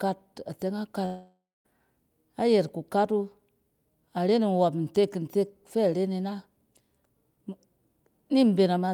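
At about 1.05 s the speech suddenly stops and the last sound gets stretched into a buzzy tail that fades out. For roughly the last 0.2 s of the gap there's just silence, and things pick up again at 1.67 s with around 0.6 s of speech gone. That's most likely a long network dropout, with the receiver trying to fill the hole by extending what it had before giving up.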